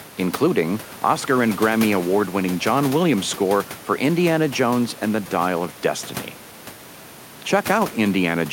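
No faults in the speech; the only other sound is the room's own background noise, about 19 dB under the talker, which belongs to the recording.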